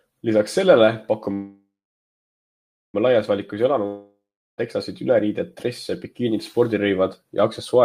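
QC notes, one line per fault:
1.33–2.96 s, call audio freeze: the last sound buzzes, fades, then 1.25 s of silence; likely a jitter-buffer underrun, so speech resumes intact but 1.6 s late.
3.86–4.60 s, long network dropout: a fading buzz, then 0.38 s of silence; likely lost packets, so 0.72 s of speech is gone before "teksasid üleriided dresse bikiinid".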